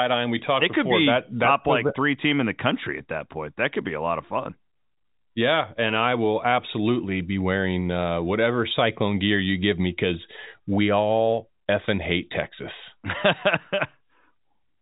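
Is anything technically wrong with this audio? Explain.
No, nothing here is actually wrong: the speech just has the narrow sound of G.711 telephone coding, with nothing above about 3.8 kHz, which is normal for that format.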